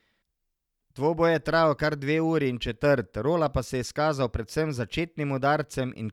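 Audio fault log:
No faults detected.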